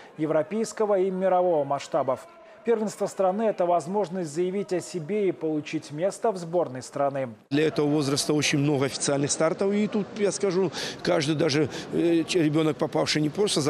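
From 8.92 s to 10.78 s the sound loses its top end, with nothing above about 9.1 kHz, and takes on a different tone and a faint new background noise well below the signal. Level stays roughly the same and there is no gap at either transition, so the change is heard purely as a shift in brightness and character. This is likely an input switched to a poorer device in mid-recording, with the original input restored at 10.78 s.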